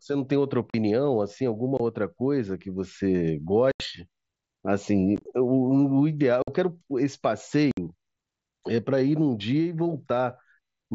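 Unconcealed Bluetooth headset packet loss cuts holes into the speech at 0.70, 1.77, 3.72, 6.42 and 7.71 s, lasting roughly 40, 20, 80, 55 and 60 ms. Around 5.16 to 5.26 s, 45 ms of loss is scattered, with runs no longer than about 20 ms, giving a brief choppy crackle. The gaps come in steps that fit 7.5 ms frames. The link dropped packets and nothing was patched in, so the holes are silence or an idle pattern with abrupt edges. There is no smeared or repeated fill as with concealment, and the speech around each hole is carried by the wideband mSBC codec.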